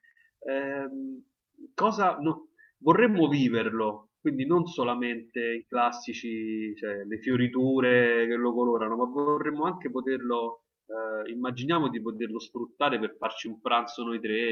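Clock drift between sender and receiver runs through the whole of this speech recording: the sending side's audio clock runs roughly 4 percent slow relative to the receiver's, so the jitter buffer keeps draining faster than it refills. The receiver has to keep compensating, and the result is a steady scatter of small timing irregularities rather than one clean break, spread at uneven intervals across the entire recording. A short stall from a late packet comes first, from 0.11 to 0.18 s. A packet failed to arrive on schedule, the jitter buffer ran dry, and the receiver held the last sound for about 44 ms until the data turned up, then resumed from exactly where it had stopped. Nothing is lost, but that sound lingers slightly too long with a slight buzz or dip, and the playout delay grows by the same 44 ms. Repeated timing corrections then run from 0.92 s to the end. To keep pace with the slow sender, the receiver keeps inserting short repeated slices of audio, all stretching the same way so playback averages about 96 percent of the original rate. 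Each repeat is tiny and the spacing irregular, so they come through as faint hiccups and a subtly uneven, dragging tempo rather than distinct glitches.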